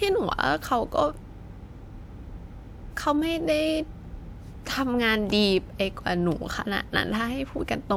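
No technical faults are audible anywhere in the recording.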